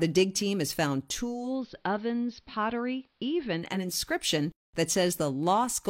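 Speech in which a hybrid radio loses its digital stream after "dig team has found" and blends to the AM analogue broadcast over 0.43 s. From 1.16 s to 3.98 s, this digital radio blending to analogue adds faint hiss and drops the level about 3 dB.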